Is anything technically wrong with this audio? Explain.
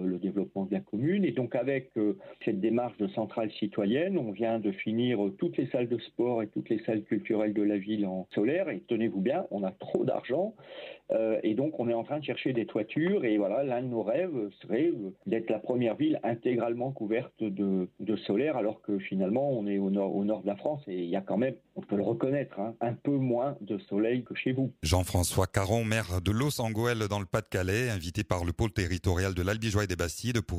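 No, nothing technically wrong.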